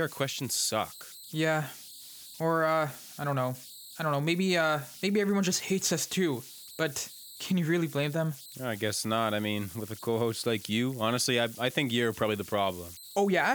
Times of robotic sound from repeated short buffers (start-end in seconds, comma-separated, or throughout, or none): none